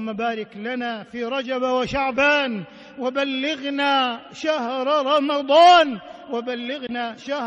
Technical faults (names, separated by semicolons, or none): compressed frames skipped